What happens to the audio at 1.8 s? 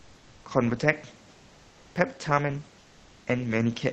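Nothing goes wrong at 1.8 s: the speech carries straight through that moment with no dropout, glitch or other fault.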